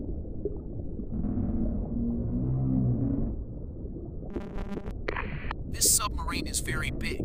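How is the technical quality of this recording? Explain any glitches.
One glitch stands out: from 4.30 to 4.91 s the sound turns into a rigid, metallic buzz locked at 200 Hz, still loosely tracing the shape of the audio underneath. This is robotic sound from repeated short buffers, likely caused by audio arriving too slowly, so playback keeps looping the most recent 5 ms chunk to fill the gaps. About half the material in that stretch is repeats, and the 5 ms loop period imposes the fixed 200 Hz pitch.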